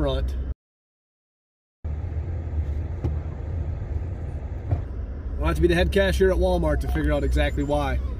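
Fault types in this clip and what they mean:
Playback stall: The sound cuts out in mid-flow at 0.52 s and stays silent for about 1.32 s. It resumes at 1.85 s. The likely cause is that the player ran short of data, or its thread was blocked, so nothing reached the output.
Catch-up at higher speed: From 1.85 s to 4.85 s the audio runs at 1.25 times normal speed. Pitch rises by roughly four semitones. The player is resampling its backlog to regain the lost time, then drops back to normal speed and pitch.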